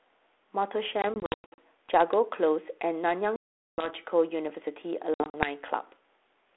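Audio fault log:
1.02–1.59 s, 3.36–3.91 s, 5.14–5.49 s: packet loss on an ADPCM call. There are hard-edged silent holes: scattered runs up to 100 ms, a solid 420 ms gap, and runs up to 60 ms. Each ends in slightly distorted speech while the G.726 decoder's predictor and step size resynchronise, unlike a plain dropout, which resumes cleanly.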